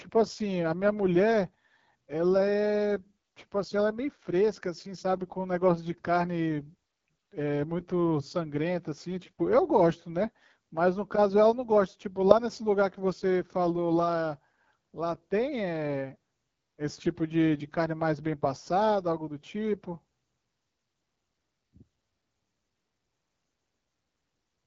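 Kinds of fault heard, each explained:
AMR wideband (HD Voice) codec: the speech is squeezed through a low-rate, pulse-driven model of the vocal tract, leaving a plainly audible rough, raspy edge that fits one of the lowest modes, about 8.85 kbit/s. A spectrogram shows nothing above 7.6 kHz and grainy, noise-like texture just below that ceiling.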